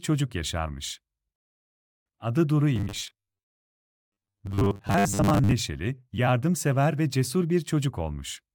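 From 2.76 to 5.52 s, new audio likely arrived too seldom, so the playback side kept filling the gaps by looping its most recent short buffer while about half of the real audio was skipped. The loop repeats at 100 Hz, which fits a buffer of around 10 ms, and that repetition imposes a fixed 100 Hz buzz on the speech. This is robotic sound from repeated short buffers: a stiff, metallic buzz that only loosely tracks the spoken phrasing.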